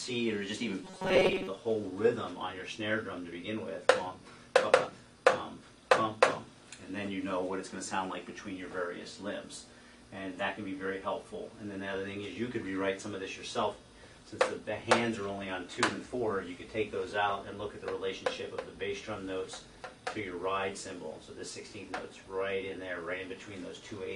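From 0.84 to 1.47 s, the audio turns into robotic sound from repeated short buffers, likely because fresh samples stopped arriving in time and playback filled the gaps by looping the most recent fragment, about 5.3 ms long, while the real audio in between was dropped. Roughly two thirds or more of this stretch is repetition. The loop imposes a fixed 188 Hz buzz, giving the sound a stiff, metallic drone that only loosely tracks its original shape.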